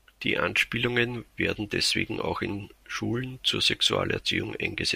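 No faults are audible anywhere in the speech recording.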